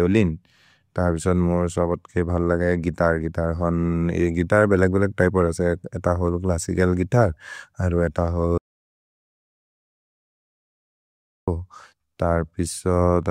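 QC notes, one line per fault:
8.58 to 11.48 s, audio dropout to silence: the speech cuts off mid-flow and about 2.9 s of dead digital silence follows, with no room tone at all, before it picks up again. Likely the input dropped or got muted while the recorder kept writing silence, so that stretch is simply gone.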